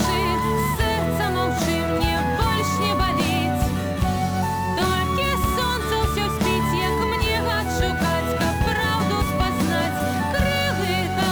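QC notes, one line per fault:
Throughout: sample clock jitter. An unsteady converter clock of roughly 10 microseconds takes samples at slightly wrong moments, adding a hiss-like roughness about 20 dB below the signal that swells on loud, bright passages. A spectrogram shows broadband noise tracking high-frequency content and vanishing in silences.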